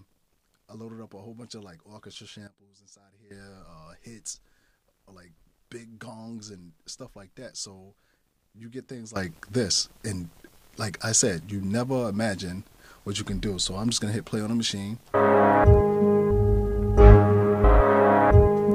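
A sudden gain jump at 2.47 s drops the level by about 15 dB until 3.31 s, and another at 9.16 s raises it by about 16 dB through the end. Sound and background noise step together, likely from gain applied without a ramp.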